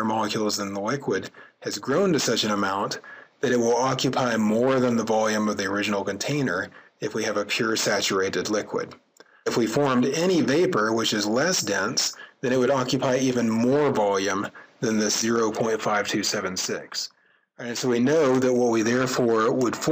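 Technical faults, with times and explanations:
No technical faults can be heard anywhere in this audio. There is nothing here that needs a time or an explanation.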